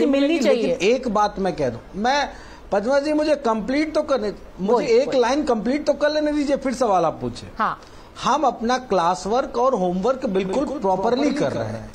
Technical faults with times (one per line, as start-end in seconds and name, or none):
10.43-11.95 doubled audio track